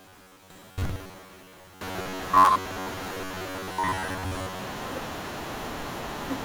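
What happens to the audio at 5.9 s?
At 5.9 s the speech carries on cleanly, with no dropout, click, distortion or other fault at that point.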